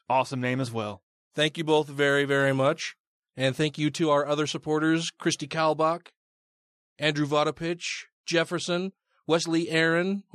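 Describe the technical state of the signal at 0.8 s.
At 0.8 s the speech signal is intact, with no audible fault at that moment.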